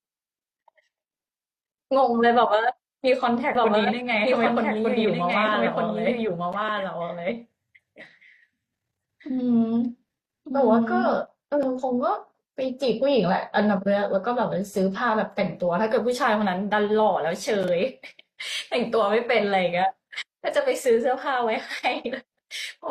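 Doubled audio track in this speech clip from 3.55 to 11.13 s: a dry copy about 5 dB quieter trails roughly a second behind and cuts in and out abruptly, likely from a second, slower capture path.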